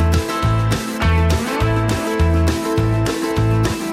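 No technical faults can be heard in the audio, so there are none to describe in time order.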